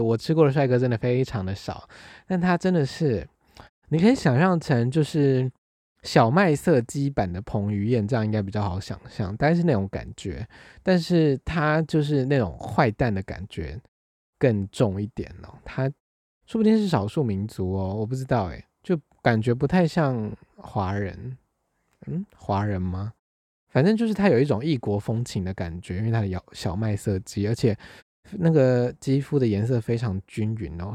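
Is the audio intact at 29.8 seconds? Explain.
Yes, the audio at 29.8 s is intact, with no dropout, distortion or glitch at that moment.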